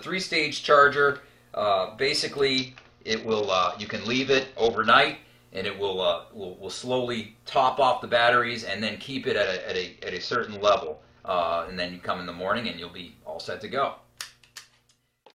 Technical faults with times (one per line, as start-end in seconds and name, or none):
2.58-4.89 Bluetooth SBC bit pool drop
9.02-9.06 chunks out of order
9.43-11.27 Bluetooth SBC bit pool drop